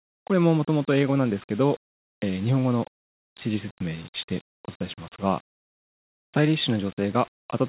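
No technical faults occur at any point in the speech, so there is nothing to place in time order.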